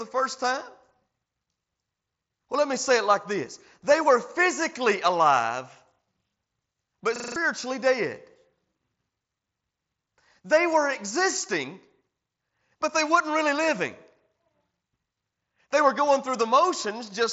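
A system hang loop interrupts this speech recording from 7.16 to 7.36 s: the computer or its audio driver stalled while the sound hardware kept replaying the same 40 ms ring buffer, five times over. The result is a rapid stutter at 25 Hz, a single sliver of sound repeating exactly, in place of about a fifth of a second of real audio. The speech arrives over a Bluetooth mSBC headset link, heard as a band stopping near 7.7 kHz with light graininess on louder sounds.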